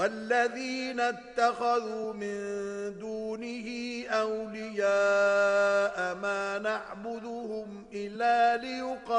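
At 2.03 s and again at 8.15 s the audio jumps forward: compressed frames skipped. Whole coded frames never reached the output, so about 100 ms of sound vanishes at the first point and about 150 ms at the second, which suggests several frames each time. That separates it from a dropout, which leaves a silent gap.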